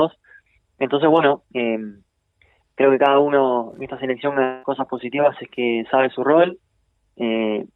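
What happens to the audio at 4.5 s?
From 4.43 to 4.65 s the audio breaks off, most likely from a long network dropout: the receiver stretches the last sound into a fading buzz for about 0.2 s, with no true silence, then resumes with that stretch lost. On a spectrogram this appears as smeared, repeating bands that decay before normal detail returns.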